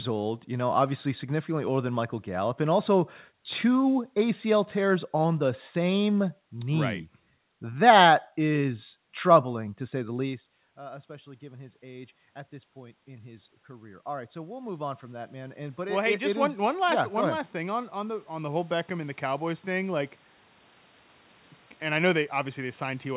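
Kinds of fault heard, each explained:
Automatic gain rising: from 9.53 to 12.18 s, after the talker moves back from the microphone around 10 s, the level control senses the input has fallen by about 19 dB and slowly raises its gain by about 4 dB before "at this". From 12.74 to 16.56 s it climbs again, by about 9 dB, before "one last yeah one". Because the gain acts on the whole signal, the voice and the room noise swell together over several seconds.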